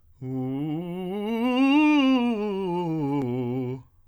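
Nothing in the music stood out as a technical fault on listening.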